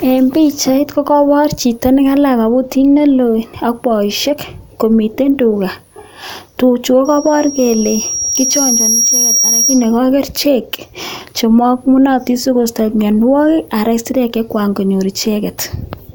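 Right after "tuchu ko", at 7.05 s, a loudspeaker feedback squeal swells over roughly two seconds into a 5.7 kHz whine as loud as the speech, lasting until 9.98 s.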